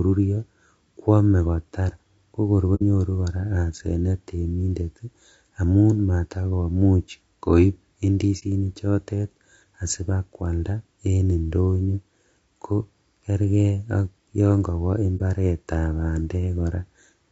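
The whole clip has a rough, grainy quality to the speech, with a hiss sitting between the harmonics and a top end that sounds thin and a bit synthetic. That's likely low-delay AAC compression, the AAC-ELD kind used on video calls, running at a low bitrate, something around 32 kbps. With so few bits to spend on each frame, the codec ends up smearing noise into the gaps between the harmonics, and the damage is plainly audible.

On top of that there are three spots of AAC frame loss with muting. The first comes at 2.75 s, right after "kwome kotar kokor", where about 60 ms of audio drops out, roughly two frames' worth. The next is at 8.39 s, a shorter gap of about 30 ms, and the last is at 15.17 s, just after "ak yon kowo", again about 30 ms. Each time the decoder had nothing for those frames and zeroed them. The overlapping windows fade the sound out and back in, so the two-frame loss is a soft-edged hole and the single-frame ones are brief dips.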